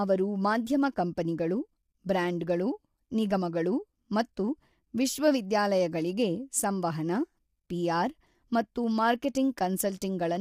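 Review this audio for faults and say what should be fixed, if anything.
Throughout the speech the voice sounds rough and grainy, with noise filling the gaps between pitch harmonics and a thin, artificial top end. That points to low-delay AAC compression, likely AAC-ELD: its short frames blur harmonic detail, and at a rate consistent with about 32 kbps too few bits remain to code it cleanly. Prevent it by raising the call bitrate or using a higher-resolution codec for recording.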